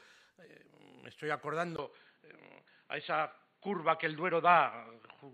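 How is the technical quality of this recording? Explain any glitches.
The recording has one clear fault. Input switched to a poorer device, at 1.76 s: after a brief 20 ms dropout, nothing above 4.5 kHz remains, likely because capture moved to a narrower-band microphone. From then on the sound is duller and boxier at much the same level, with faint new background noise.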